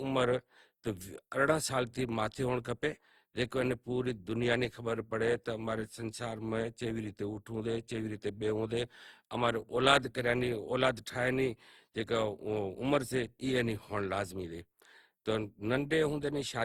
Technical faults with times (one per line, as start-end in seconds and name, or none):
0.00-16.64 generation loss